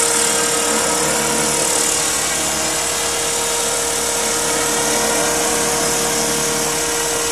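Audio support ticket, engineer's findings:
No faults found on listening: the signal stays continuous throughout, with no audible dropouts, distortion or interruptions.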